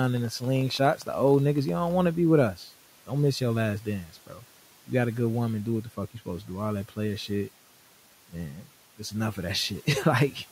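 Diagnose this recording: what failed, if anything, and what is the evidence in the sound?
The failure is in call processing: speech cut by the noise suppressor. At 0.96 to 1.08 s, and again at 4.04 to 4.44 s just after "miss your last", the speech is pulled down by about 11 dB for roughly 0.1 s and 0.3 s, so those sounds come out swallowed and faint. The suppressor misjudged low-level speech as noise and applied its attenuation, treating it like the room noise sitting about 23 dB below the speech. A spectrogram shows speech energy abruptly thinning in those stretches, and the waveform envelope dips.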